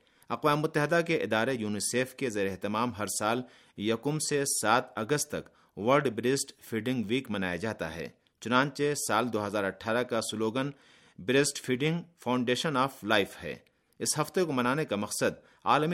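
From 9.61 s to 12.11 s the speech takes on channel delay (comb filtering): one channel runs late by about a single sample, roughly 0.02 ms, and summing to mono cancels the shared content where the two fall out of phase. With so tiny an offset the first notch sits near 20 kHz, so it sounds like a gentle dulling of the extreme top rather than a hollow, phasey colour. Unlike a low-pass filter, the loss comes from a cancellation notch, not a steady roll-off.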